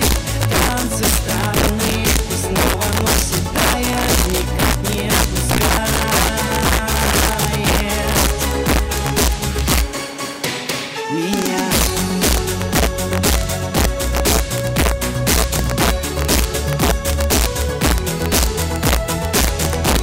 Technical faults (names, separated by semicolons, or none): integer overflow